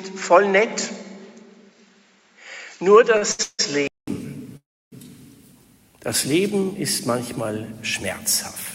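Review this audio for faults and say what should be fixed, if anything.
From the start to 4.08 s, the sound is dull, with nothing above 7.6 kHz. A faint new hiss sits about 45 dB down. A 200 ms silence marks where it clears. This is likely an input switched to a poorer device. Lock the recording to one microphone.

Two short stalls from a late packet occur at 3.17 s and 3.32 s. Sound is held for 43 ms and 70 ms, then resumes intact. A deeper jitter buffer would absorb these.

Call audio freezes occur at 3.43 to 3.61 s and 4.57 to 4.94 s. Held sound fades, with silence of 20 ms and then 300 ms, before playback continues. Packets were likely held up in the network. A more stable connection would prevent this.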